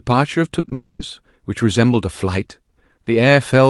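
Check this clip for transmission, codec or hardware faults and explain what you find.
Two transmission faults occur back to back in this speech clip, heard through a call codec whose high end stops near 12 kHz.

Short concealed packet loss hits at 0.59 to 0.65 s, 0.65 to 0.69 s and 0.69 to 0.73 s, gaps of 40, 20 and 20 ms. The receiver extends the preceding sound to cover each hole. The result is a smeared, wobbling stretch.

A long network dropout follows at 0.73 to 1.01 s, about 260 ms. The sound continues as a fading buzz or hiss rather than real speech. This likely reflects a gap where no audio arrived. Speech resumes afterward with that portion missing.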